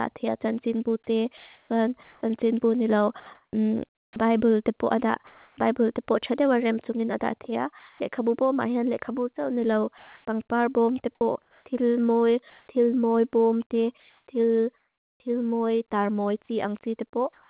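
Speech carried over a call path with nothing above 4 kHz, which fits G.711-style narrowband coding. From 1.37 to 5.57 s, sound chopped by the voice detector, likely from the detector toggling transmission repeatedly, replaces about 1.26 s in total, so the speech turns choppy. Comfort noise in place of the background appears at 7.79–8.0 s, 9.98–12.68 s, 14.0–15.2 s and from 17.33 s to the end: the sender likely stopped transmitting during pauses, and the receiver filled them with flat, featureless noise, about 1 dB louder at 7.79 s and about 2 dB quieter at the end. Right after "ni lau" at 9.98–10.25 s, sound dropped by the voice detector cuts off roughly 110 ms of speech, likely because the detector mistook the quiet tail for background, and comfort noise stands in until 10.25 s.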